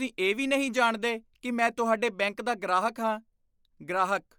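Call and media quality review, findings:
Grainy, breathy edge on the speech, whole clip. Likely Bluetooth LC3 compression; plainly audible, fits about 48 kbps with 10 ms frames, upper band noise-filled, nothing above 20.2 kHz.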